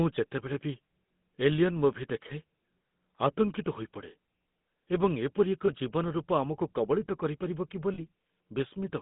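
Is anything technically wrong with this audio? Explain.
Yes. The speech has been through the GSM full-rate codec for its whole length, and two short dropouts show lost GSM frames.

The codec models the vocal tract and drives it with a sparse, regularly spaced pulse excitation at a low rate, which fits 13 kbit/s. The line passes roughly 150 Hz to 3.6 kHz, so everything above is gone. The result is a plainly audible buzzy, gravelly roughness over the voice, with a muffled, band-limited top end.

At 5.66 s about 20 ms of audio went missing, and at 7.94 s about 40 ms. In each gap the decoder kept repeating the settings of the last good frame. Neither gap lasts long enough to fade to silence, so each one is heard as a brief rough, metallic ring smeared across the break.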